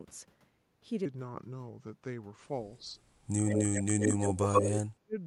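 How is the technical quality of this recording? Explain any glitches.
The speech has three clear technical problems: a long slowed-down section, several dips and dropouts in the talker's voice, and a delayed echo.

From 1.05 s to the end, the speech turns deeper and slower, running at about 0.8 times normal speed and sitting roughly four semitones low. Because speed and pitch drop together, this is a section at the wrong speed, most likely from an editor or player using a mismatched clock.

The voice is pulled down at 2.80–2.99 s by about 5 dB, then much harder at 3.85–4.10 s (about 35 dB), 4.29–4.51 s (about 15 dB) and 4.96–5.16 s (about 40 dB). Each gap lasts around 150–200 ms. This pattern is speech suppressed in double talk, likely an echo canceller muting the talker while both sides spoke.

A second copy of the voice trails 124 ms behind the original at 3.46–3.83 s, at about the same level as the speech, and again at 4.01–4.77 s, about 5 dB louder than it. 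This echo leak likely comes from a loudspeaker-side canceller letting its microphone pickup slip back into the call.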